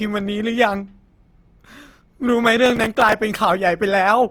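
Across the whole speech recording, tones come out rough, grainy and plainly noisy while the full bandwidth up to about 20.2 kHz stays intact, the sound of Opus compression in its music mode, likely at a low rate around 24 kbps. From 2.66 to 3.13 s a gritty crackle tears through the sound. This is processor overload crackle: many very short buffers of a few milliseconds each miss their deadline in a row, and each one is filled with stale audio that joins the stream with hard edges.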